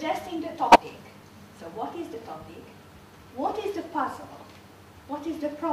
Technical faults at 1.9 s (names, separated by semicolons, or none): none